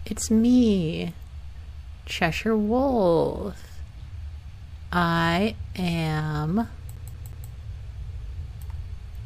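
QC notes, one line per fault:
6.96 to 7.50 s, CD stuck on one turn: a quick, even stutter as the same 0.18 s slice of sound plays three times in a row, each repeat broken by a brief mute, because a scratch keeps throwing the laser back one track at that spot.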